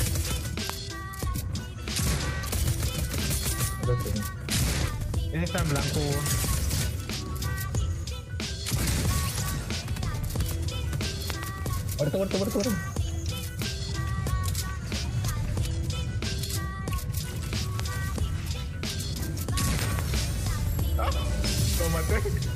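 Four loud pops break through here: a single one at 0.70 to 0.72 s, a quick double at 11.30 to 11.45 s, another single at 17.80 to 17.82 s, and a second double at 19.79 to 20.01 s. Each jumps to about 20 dB above the sound, a sharp thump sitting on top while the audio runs on beneath it. That's a sudden voltage step or spike, likely from a plug, switch, static or driver glitch, hitting the chain.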